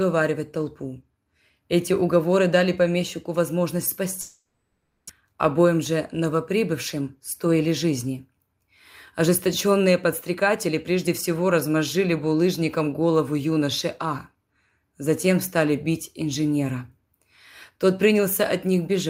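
Right after "уговоры дали помещику возможность", from 4.21 to 5.11 s, the speech gives way to a fading buzz that decays into near-silence, then resumes with a stretch missing. This is likely a long network dropout: the receiver filled about 0.88 s by extending the last sound, and roughly 0.6 s of speech never arrived.

Next comes a jitter buffer speed-up: the speech sounds hurried at unchanged pitch from 6.94 to 8.68 s (8% faster, around 150 ms trimmed), then from 9.21 to 9.88 s (5%) and from 10.30 to 11.08 s (4%), just before "всего размозжили булыжником голову". After a backlog built up, the receiver cut out tiny pitch-period slices to reduce the delay.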